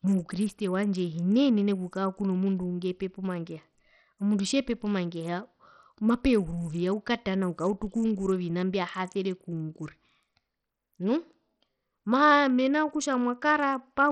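Throughout the recording the speech has most likely been through Bluetooth SBC compression with a very small bit pool, which fits a rate near 64 kbps. The upper sub-bands starve, so the treble flickers and drops out, leaving a gritty, aliased haze on the voice.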